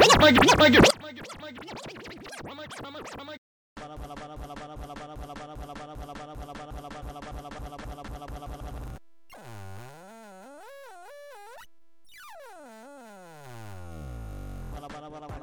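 From 0.91 s to the end, the sound collapses to a faint remnant, about 25 dB quieter. Centred content nearly disappears. This is likely one channel inverted, so the shared signal cancels when left and right are summed to mono.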